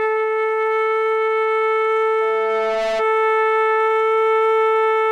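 At 2.21 s a loudspeaker feedback squeal rises out of the music. A microphone is hearing the loudspeaker it drives. Around 666 Hz the loop gives back more than it takes in. So that one tone feeds on itself. It swells over most of a second. It climbs to roughly the loudness of the music itself. The pure, piercing pitch sits on top of everything. It stops at 3.06 s.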